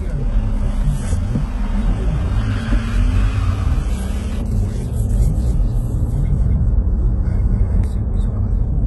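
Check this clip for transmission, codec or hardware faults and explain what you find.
Two faults are audible: heavy codec damage across the whole clip, and a second, delayed copy of the audio for part of it.

HE-AAC compression runs from start to finish. The treble sounds bright but gritty and metallic, with sharp, hissy sounds smeared into a coarse sheen, and nothing is left above 11.8 kHz. This is likely HE-AAC at a low rate, around 16 kbps. Only the lower band is coded properly. The top is rebuilt by copying lower bands upward, so its harmonics don't line up with what sits beneath.

A doubled audio track appears from 5.14 s to 7.84 s. A full-band copy trails the original by roughly a third of a second at about 5 dB lower, with no decay or room colour, and it cuts in and out abruptly at those times. The likely cause is the same audio reaching the mix twice, through a slower second path or an edit that left two copies out of step.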